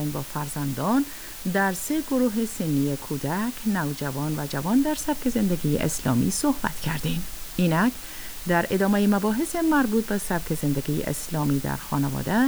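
From start to finish there's low bit depth with dither: about 6 bits, so dithered rounding error becomes a steady, even hiss only around 15 dB below the sound, with no distortion.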